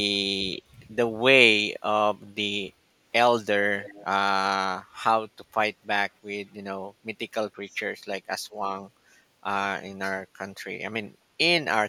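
From 3.81 to 4.05 s, a faint delayed copy of the speech returns about 300 ms late, roughly 20 dB down. This echo leak likely comes from a loudspeaker echo canceller missing some pickup.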